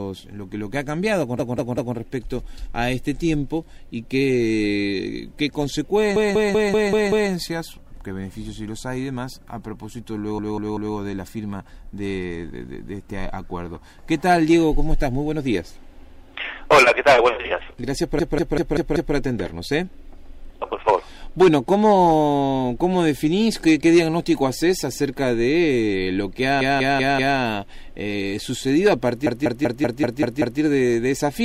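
Repeated frames make the audio stutter at 1.39, 6.16, 10.38, 18.19, 26.61 and 29.26 s. Each time, the same 192 ms block of compressed frames plays three to seven extra times. Unlike a dropout, no sound is lost, and the clip grows longer by every repeat.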